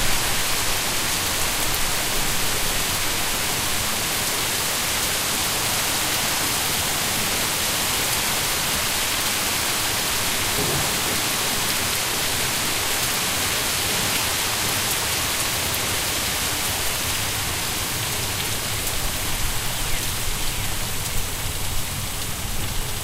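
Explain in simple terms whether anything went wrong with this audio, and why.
A thin, high whistle runs under the sound for the whole clip. It stays at one pitch, 8 kHz, and sits well below the main sound. This is USB whine. The USB connection draws power in rapid regular bursts, and that electrical noise leaks into the audio.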